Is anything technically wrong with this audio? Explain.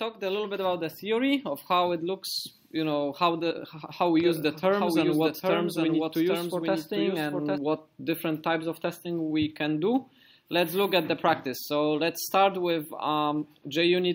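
Yes. From 4.24 to 7.58 s there is a doubled audio track. A second full-band copy trails by roughly 0.7 s, about 5 dB quieter, starting and stopping abruptly. Likely cause: a slower second capture path or misaligned edit.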